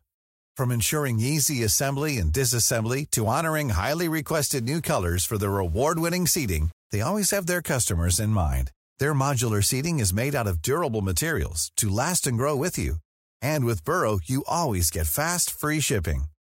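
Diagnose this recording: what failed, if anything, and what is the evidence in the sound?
Speech between 4.51 and 7.12 s, after "disassembly to honoring highly" and before "have their customers", turns grainy, a rough fizz that rides on the sound and grows grittier on quieter sounds. This is low bit depth without dither, likely from sample-format conversion rounding to 8 bits. The error is about 35 dB below the signal and tracks it. A spectrogram shows a broadband haze tied to the speech energy, and the zoomed waveform shows coarse staircase steps.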